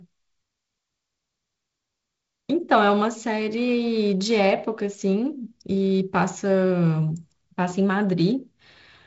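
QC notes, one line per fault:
No faults are heard in this speech clip. The G.722 wideband telephone coding shows as a top end that stops near 7.7 kHz and a light coding grain, which fits the 48 kbit/s mode, where the lower band gets fewer bits.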